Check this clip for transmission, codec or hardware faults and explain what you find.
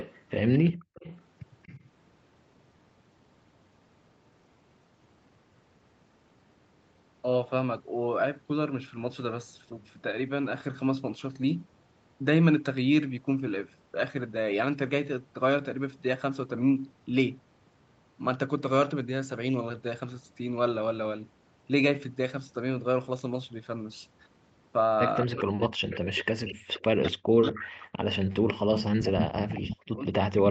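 Three kinds of echo-canceller fault show up in this speech, all heard through a call path whose audio stops at 8 kHz.

Echo leak: From 0.0 to 1.88 s, from 25.91 to 27.71 s, and from 28.79 s to the end, a second copy of the voice trails the original by 238 ms. It is about 20 dB below the speech at first, about 15 dB below in the middle stretch, and only about 5 dB below at the end. The likely cause is a far end on loudspeaker whose echo canceller let part of its microphone pickup pass back down the line.

Background gated by the echo canceller: Between 0.7 and 0.94 s the room tone suddenly falls away, dropping by as much as about 40 dB for roughly a fifth of a second, and then snaps back. While the loudspeaker side was playing, its canceller clamped its microphone gain almost shut. The background disappeared with it and returned when the suppression released.

Speech suppressed in double talk: From 25.24 to 27.61 s, and again from 28.14 s to the end, the voice is pulled down, losing up to around 40 dB at its deepest and for about two seconds in the first stretch. 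Both sides were talking at once. The canceller likely could not tell the local talker from the loudspeaker echo and pulled down everything together.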